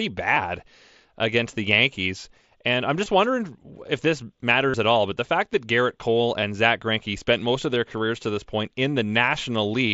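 Speech with short buzzy blips at 0.35, 3.04 (just before "wondering if this") and 6.41 s, a nearly hidden dropout at 7.75 s (between "spent most of" and "careers to this point"), plus a longer held, tonal stretch from 4.70 to 4.74 s, between "wondering if this" and "at all but the", ending in a slight warble. This is concealed Bluetooth headset packet loss over the wideband mSBC link: the receiver patched each gap by repeating a closely matching recent slice of waveform.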